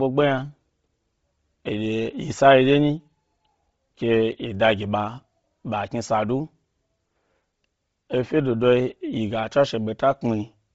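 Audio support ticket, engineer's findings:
Speech, throughout. Top end gone above 7.7 kHz; remaining highs breathy and grainy. Likely Bluetooth LC3 compression: starved encoder zeroing upper bands and filling them with noise, heavy damage fitting roughly 24 kbps with 7.5 ms frames. Unlike a plain low-pass, the band below the cutoff carries synthetic noise grain rather than clean, dull rolloff.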